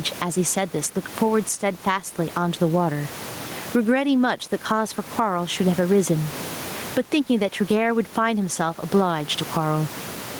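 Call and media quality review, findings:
Gain pumping throughout the clip. Input gain likely set far too high, with a fast limiter pulling level down on every loud peak, then releasing. Gain swing of around 20 dB. Dynamics squashed flat. The room noise sits about 29 dB below speech.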